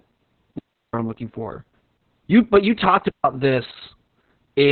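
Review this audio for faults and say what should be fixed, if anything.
The speech sounds muffled, hoarse and faintly robotic throughout, with no content above about 19.3 kHz. This is heavy Opus voice compression: the SILK coder runs narrowband, with coarse excitation and long 60 ms frames, which fits a bitrate near 6 kbps. Encode at a higher Opus bitrate so the coder keeps wideband audio and finer detail.

Two clean holes of near silence with no noise around them: 0.59 to 0.94 s (about 0.35 s), right before "I'm looking for", and 3.10 to 3.24 s (about 0.15 s), right after "but you talked". These are digital wireless dropouts, where the receiver lost too much data and muted with a brief fade. Improve the wireless link by shortening the distance, keeping line of sight, or moving to a clearer channel.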